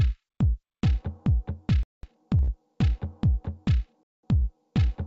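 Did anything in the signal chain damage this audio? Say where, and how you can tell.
Yes. Twice the audio drops into hard-edged silence, from 1.83 to 2.03 s and again from 4.03 to 4.23 s, each hole exactly 200 ms long and spaced 2 s apart. That regularity marks a gap between chunks at the storage or playback stage: the stream was handled in 2 s blocks, and silence was left at each join rather than any sound being lost.

Two brief holds follow, at 2.43 to 2.50 s and 4.39 to 4.44 s, where the sound smears and freezes for 45 ms and then 29 ms before carrying on from the same place. This is a short stall from a late packet on the network side of the G.722 call path, which is itself band-limited at 8 kHz. The jitter buffer ran dry, stretched the last audio until the packet arrived, and nothing was skipped, so the timing slips by the same 45 and 29 ms.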